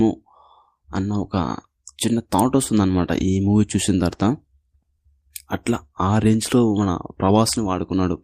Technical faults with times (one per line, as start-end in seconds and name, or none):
none